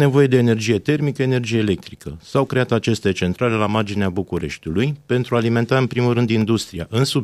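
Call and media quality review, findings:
Periodic USB or driver dropouts, 1.30–6.42 s, every 1.02 s: sub-millisecond gaps of silence, heard as regular ticks in speech; a background task is stalling the audio driver.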